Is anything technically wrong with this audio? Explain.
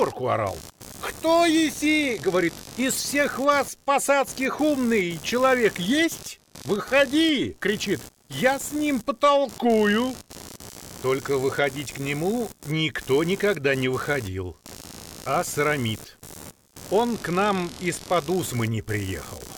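Yes. Throughout, a buzzing, chirping layer sits about 20 dB below the sound, pulsing around 70 times a second and shifting with the computer's activity rather than the audio. This is computer activity noise: processor, graphics or mouse load changes disturb the audio circuit's shared ground.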